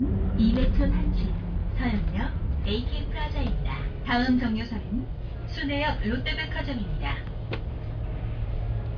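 No technical faults can be heard anywhere in the audio, and the signal stays intact and steady throughout.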